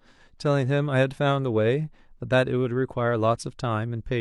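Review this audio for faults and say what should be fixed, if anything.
Nothing to fix: no audible faults on listening, so the speech needs no repair.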